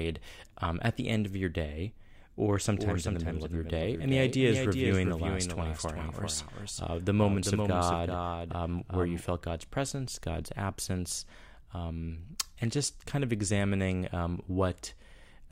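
A second capture path, or an edit holding two copies out of step, has likely mixed the speech in twice from 2.51 to 9.29 s: a doubled audio track. A dry, full-band copy trails by about 0.4 s, roughly 5 dB quieter, and cuts in and out abruptly.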